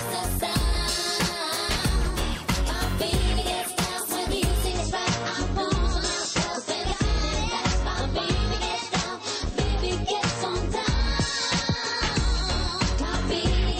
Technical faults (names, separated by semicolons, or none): adaptive stream at a lower bitrate